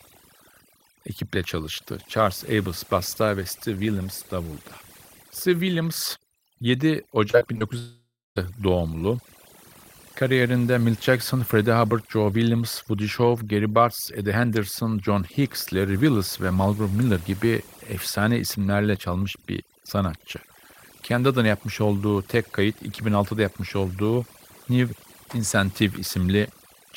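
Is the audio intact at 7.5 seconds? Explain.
No. From 7.31 to 7.63 s the speech is hit by repeated packet loss, heard as robotic sound. Four short gaps, none longer than 20 ms, are patched by stretching the preceding sound, so about a quarter of that span is concealed filler. It sounds choppy. On a waveform, short cycles repeat identically at each patch. On a spectrogram, smeared, frozen bands sit where detail should change.

Overdone noise removal also runs through this moment. Bands near the noise estimate are pushed down hard, taking quiet parts of the voice with them. The background drops and breaks up into twinkling specks. A spectrogram shows a dark floor dotted with isolated bright specks and ragged holes in the voice's harmonics.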